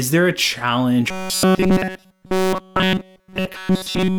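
From 1.09 s to the end, the speech collapses into robotic sound from repeated short buffers: a rigid, metallic buzz near 188 Hz replaces the voice. The likely cause is starved playback looping roughly 5.3 ms segments continuously while the incoming audio is skipped.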